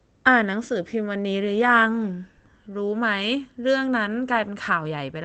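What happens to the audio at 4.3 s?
Nothing goes wrong at 4.3 s: the speech continues intact there, carried through the call path as it is everywhere else.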